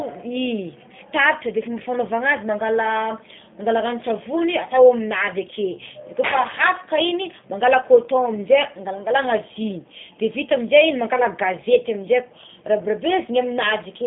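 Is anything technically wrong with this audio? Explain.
Yes. Throughout the speech, the sound is rough, buzzy and faintly synthetic, with a narrow telephone band running from about 150 Hz to 3.6 kHz and nothing above it. This is G.729 codec damage, plainly audible. The coder doesn't keep the waveform. It rebuilds each 10 ms frame from a vocal-tract filter, a pitch predictor and a few pulses, and that sparse excitation produces the grainy, artificial texture. The sound points to the 8 kbit/s G.729A variant.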